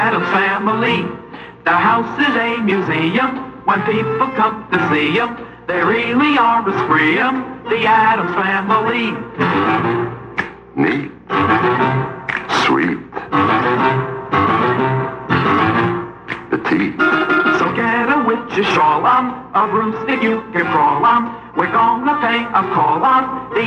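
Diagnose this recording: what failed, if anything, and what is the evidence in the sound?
Hard clipping appears from 4.45 to 4.75 s and again as brief single hits at 20.76 s and 21.60 s. The overload is slight, around 0 dB to about 1 dB past full scale, so the sound shows crackle on the loudest peaks rather than a continuous fuzz. The peaks exceeded what the converter or a fixed-range sample-format stage could represent and were cut flat, and those squared tops add the high harmonics heard as the crackle.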